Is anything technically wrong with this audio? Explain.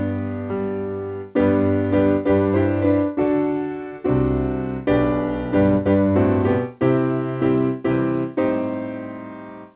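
No, nothing is technically wrong: the audio has come through a telephone-style call path whose band stops at about 4 kHz, which fits G.711 A-law narrowband coding, and that path is working as designed.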